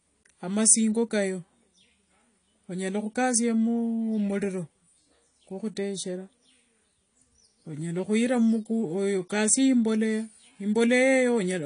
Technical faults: AAC compression

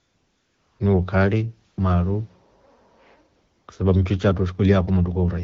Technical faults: AMR comfort noise

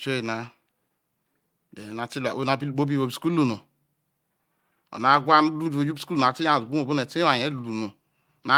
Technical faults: none

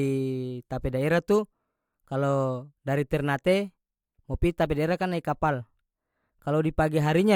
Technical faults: none

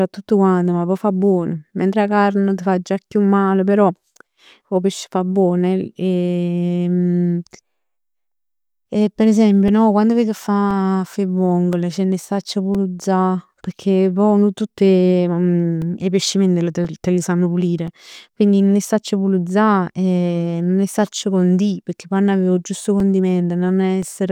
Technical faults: periodic USB or driver dropouts

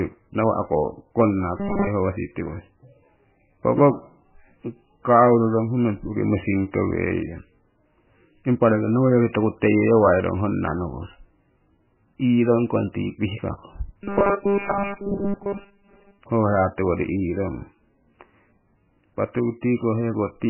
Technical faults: MP3 compression; robotic sound from repeated short buffers

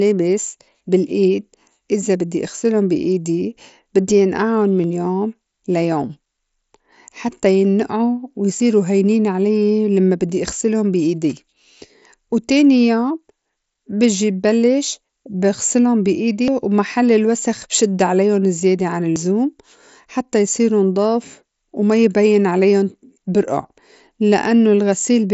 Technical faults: dropped buffer (overrun)

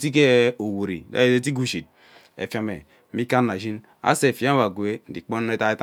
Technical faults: none

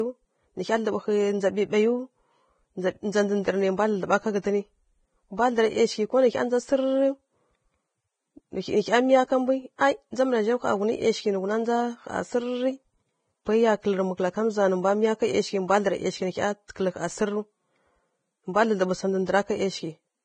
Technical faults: Vorbis compression

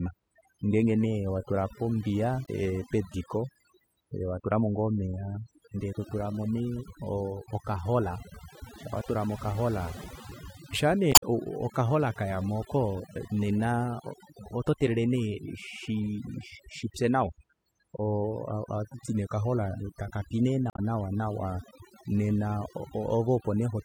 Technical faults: overdone noise removal; damaged data in a compressed stream

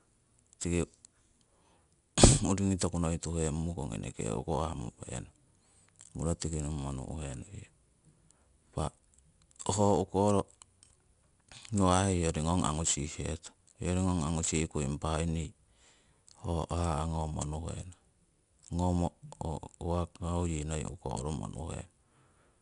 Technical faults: 4-bit ADPCM compression

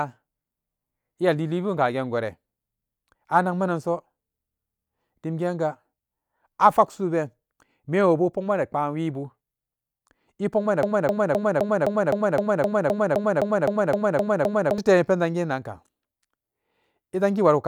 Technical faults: broken-record loop

